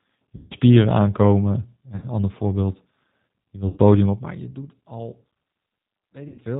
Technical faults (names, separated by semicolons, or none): G.729 codec; VoIP packet loss concealed by the speech codec